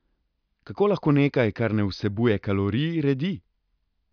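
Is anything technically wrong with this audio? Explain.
No, nothing is technically wrong with this audio.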